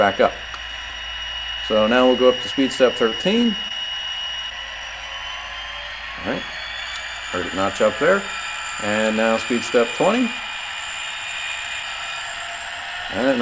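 From 3.10 to 3.72 s there is repeated packet loss, giving a robotic sound. Short holes open again and again, the longest about 19 ms. Each is patched by stretching the previous sound, so the audio turns choppy with pieces missing. The call path shows nothing above 8 kHz, which fits G.722 at 64 kbps.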